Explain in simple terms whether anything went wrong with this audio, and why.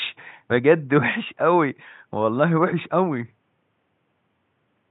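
Nothing went wrong; no technical faults can be heard.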